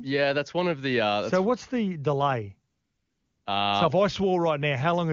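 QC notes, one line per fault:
2.71–3.45 s, AMR comfort noise: after "so what's the delay" the phone sent no speech frames for 740 ms, and the receiver filled the gap with synthetic noise, replacing the real background with a steady, smooth hiss. The spectrogram shows a uniform, featureless band with abrupt edges.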